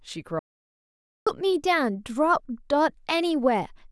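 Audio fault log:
0.39–1.27 s, audio dropout to silence: the speech cuts off abruptly and returns mid-flow after about 0.87 s of silence with no room tone, likely because the input was lost while the recorder kept writing silence, so that stretch of speech is gone.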